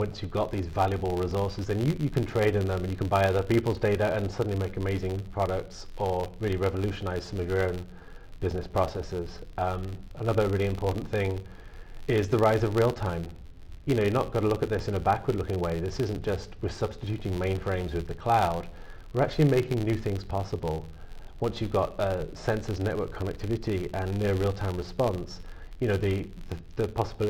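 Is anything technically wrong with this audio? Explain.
Yes, there's a problem. Throughout the clip there's a filter restarted on every block: it drops its state at each boundary and starts from silence, leaving a small transient. That gives an 86.1 Hz buzz that tracks the sound's level, which fits a 512-sample buffer.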